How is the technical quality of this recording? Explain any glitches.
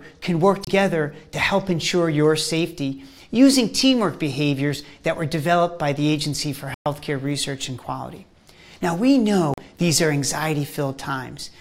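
The recording has three brief dropouts to silence. Each is likely a Bluetooth stall. The first runs from 0.65 to 0.67 s, about 28 ms. The second, the longest, runs from 6.74 to 6.86 s, about 116 ms. The third runs from 9.54 to 9.58 s, about 40 ms. In each, the sound stops dead and then resumes. Interference delays the wireless packets, the receiving buffer empties, and playback halts until resent data arrives.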